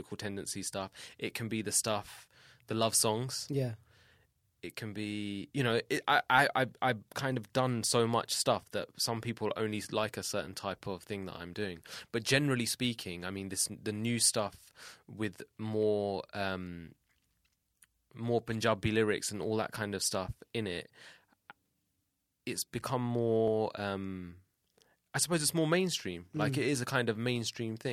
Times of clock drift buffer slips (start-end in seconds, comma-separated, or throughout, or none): 3.28-27.51